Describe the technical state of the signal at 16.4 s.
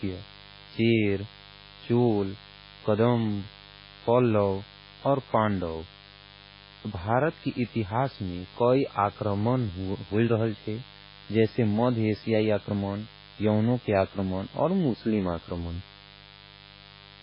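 At 16.4 s a mains buzz is present, as it is across the whole recording. Switching spikes from a dimmer, rectifier or poorly shielded lead are getting into the signal path twice per cycle of the 50 Hz supply. That builds a dense series of 50 Hz harmonics reaching well up the spectrum. It sits roughly 25 dB below the speech as a constant, gritty rasp under everything, including the pauses.

The same moment, like the rest of the clip, also carries heavy damage that points to MP3 compression, likely at a very low bitrate in the region of 16 kbps. Short of bits, the encoder has discarded everything above 5.3 kHz and is dropping quieter frequency lines that flicker in and out between frames. The speech sounds dull and muffled, with a watery, swirling texture, metallic chirping on sibilants and blurred consonant onsets.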